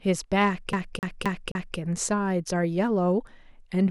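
A scratch keeps throwing the laser back one track, so from 0.73 to 1.78 s the same 263 ms of speech repeats four times, a fast, even CD stuck on one turn stutter.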